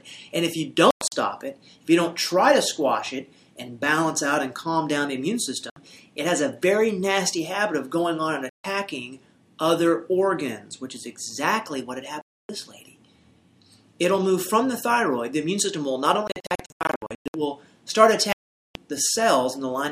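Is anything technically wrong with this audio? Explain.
Yes. The sound cuts to silence six times: 0.91–1.12 s, 5.70–5.76 s, 8.49–8.65 s, 12.21–12.49 s, 16.27–17.34 s and 18.33–18.75 s. This is likely a Bluetooth dropout. Packets arriving too late for the headphones are discarded, so output stops abruptly and resumes further along, as though the missing audio had played unheard. The holes at 0.91 s and 16.27 s are clusters of shorter gaps, each under about 0.11 s.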